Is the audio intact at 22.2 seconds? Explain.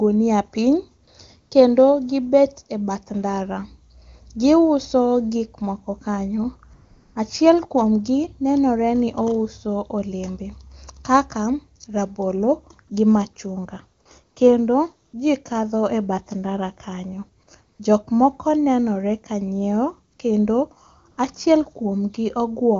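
Yes, the speech at 22.2 seconds comes through intact, carried cleanly by the AMR wideband (HD Voice) codec at its top rate of 23.85 kbit/s.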